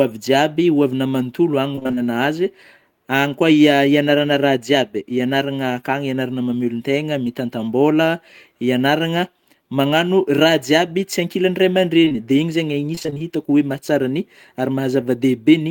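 From 1.75 to 1.99 s, repeated packet loss (robotic sound) sets in. Holes of up to about 23 ms recur, and nearly half the stretch is patched by continuing the last sound. The speech turns choppy.

Around 12.05 to 12.17 s, just before "dia iny", short concealed packet loss strikes three times in quick succession, at about 12.05, 12.09 and 12.13 s. Each 20 ms hole is bridged by extending the preceding sound, heard as a brief smear or wobble that slightly stretches the timing.

From 12.95 to 13.23 s, repeated packet loss (robotic sound) returns. Gaps of about 20 ms arrive one after another, and almost half the span is filled in, leaving broken speech with pieces missing.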